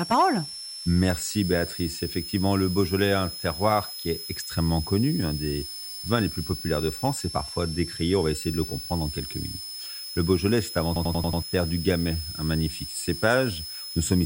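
Throughout the speech, a switching supply whistle sits high above the voice, wandering between about 5.1 and 5.5 kHz at roughly 10 dB below the speech. It comes from a switching power supply running in an audible burst mode or beating against another supply. Unlike mains hum or a fixed interference tone, its pitch is not locked. It drifts within that band.

From 10.96 to 11.42 s, a system hang loop takes over. The computer or driver stalled while the audio hardware kept replaying the same ring buffer. A 93 ms slice repeats five times at 10.8 Hz, which fits a 4096-sample buffer, and roughly half a second of speech is lost. It sounds like a machine-gun stutter. Unlike network jitter or dropouts, each repeat is an identical copy rather than a gap or a smeared fill.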